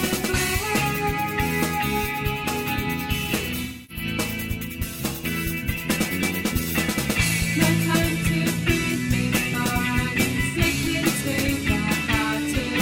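At 3.64 s the sound turns smeared and noisy for about 256 ms, until 4.04 s. This is AAC frame loss with concealment. The decoder had no data for this stretch, which fits roughly six lost frames. It rebuilt the gap from the last good spectrum. Texture carries on, but detail and phase are wrong. A shorter patch follows at 10.46 s, lasting about 85 ms. It sounds briefly phasey and blurred.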